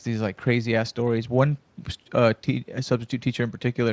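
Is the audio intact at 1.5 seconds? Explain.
Yes, the speech at 1.5 seconds is intact, with no fault at that moment.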